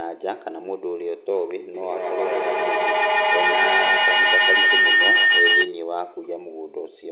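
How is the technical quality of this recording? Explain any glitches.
The recording is marred by a feedback howl. The audio is band-limited to about 4 kHz, which fits a narrowband telephone codec. From 1.74 s to 5.8 s, two devices in one room form a loop that gains level each pass. The repeats grow and narrow to a whistle near 2 kHz, pulsing roughly every 150 ms and peaking about 9 dB above the speech. A spectrogram shows a bright horizontal line; the waveform swells into a dense block.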